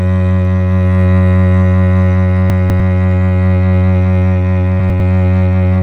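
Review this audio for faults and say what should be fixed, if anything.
Chunks out of order at 2.5–2.8 s and 4.8–5.0 s: a 100 ms chunk of the music plays two chunks late, then one late, jumbling the passage with hard joins. Sequence-number each chunk and reorder in the buffer before playback or writing.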